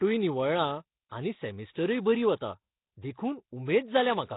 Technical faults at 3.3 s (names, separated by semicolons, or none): Nellymoser compression